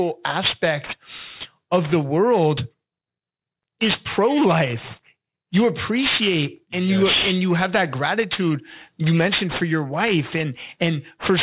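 Aliasing runs through the whole speech clip: high-frequency energy folds back below about 4 kHz, fitting a drop to an 8 kHz rate without filtering, so sibilants turn gritty and metallic at fairly strong level. Plain band-limiting would sound dull instead.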